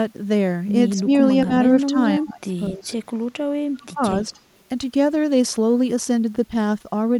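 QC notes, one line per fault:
0.96–1.08, 1.46–1.51, 1.83–1.96, 2.20–2.54, 2.70–2.87, 3.80–4.16 and 4.34–4.38 s, speech suppressed in double talk: with both sides talking at once, the echo canceller likely mistook the near talker for loudspeaker echo and turned it down. The speech ducks briefly, from a slight dip to about 25 dB at 2.20 and 3.80 s.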